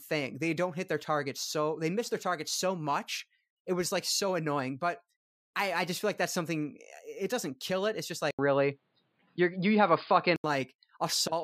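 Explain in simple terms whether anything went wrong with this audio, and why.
At 8.31 s, after a brief gap of about 80 ms, the speech turns dull and boxy, loses everything above 4.9 kHz, and shifts in loudness and background hiss until 10.44 s. The likely cause is the input switched to a poorer device; a filter alone wouldn't bring that gap or new hiss.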